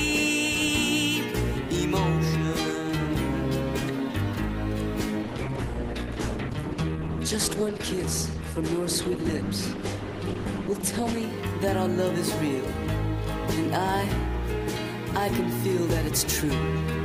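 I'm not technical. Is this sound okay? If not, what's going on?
No. From 5.23 to 11.23 s you hear an adaptive stream at a lower bitrate: the connection slowed, so the player switched for a while to a smaller, more squeezed version of the audio. The sound suddenly turns processed, then snaps back, with no gap.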